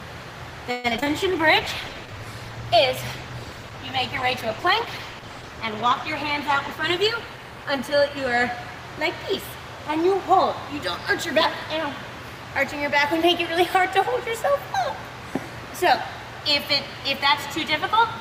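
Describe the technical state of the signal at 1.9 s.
At 1.9 s a call bitrate drop is in force (1.18 to 8.95 s): the encoder falls from 96 to 13 kbps, so the sound is coarse and muffled, with the spectrogram's upper band cut off. A jitter buffer slow-down (1.89 to 2.26 s) also repeats pitch periods, adding 66 ms at 84% speed, which stretches the sound at unchanged pitch; the waveform shows repeated, near-identical cycles.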